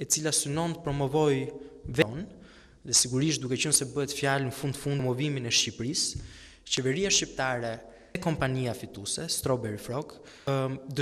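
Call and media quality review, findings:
Short glitches at 2.02, 4.99, 8.15 and 10.47 s. Damaged data in a compressed stream. The decoder misreads the corrupted frames, loses sync, then resyncs on the next frame header. This differs from a clean dropout or concealment gap: the decoder loses its place in the stream and hunts for the next frame, rather than simply filling a gap.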